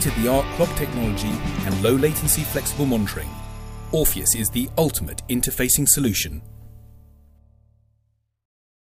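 Nothing technical goes wrong anywhere in this clip, so there's no fault to point out at any moment.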